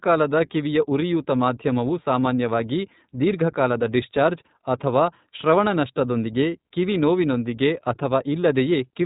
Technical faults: iLBC codec

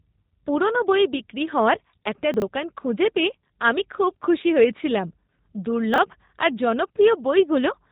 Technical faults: G.729 codec; chunks out of order

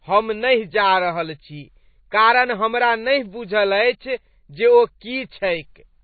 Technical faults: MP3 compression

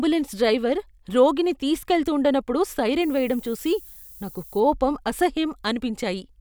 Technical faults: low bit depth with noise shaping

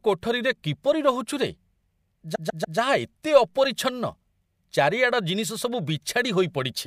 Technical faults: repeated frames

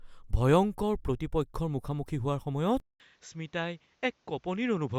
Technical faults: input switched to a poorer device

